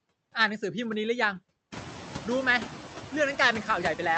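Noise suppressor artifacts run through the whole clip. The suppressor only takes about 4 dB off the background, so once the room noise jumps by about 18 dB at around 1.5 s, the leftover noise swells and dips with the speech. The top end stops near 8 kHz, which fits an Opus call path.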